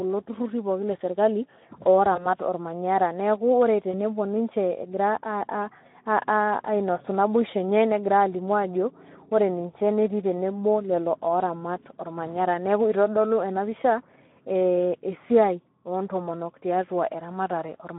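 Speech coded throughout with the Speex codec, at a rate the damage suggests is around 11 kbps, with the line band running from about 150 Hz to 3.6 kHz. Too few bits are left for the excitation signal, so the voice is plainly hoarse and noisy. VoIP packet loss concealed by the speech codec occurs twice, at 2.15 to 2.26 s and at 3.91 to 3.95 s. Each gap sounds like a single lost 20 ms packet. The decoder stretches the last pitch and filter into a brief sound that fades, and the voice stays weakened until it recovers.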